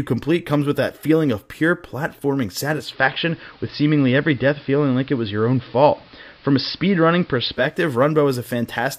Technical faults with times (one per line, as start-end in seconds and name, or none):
2.65-7.82 digital radio blending to analogue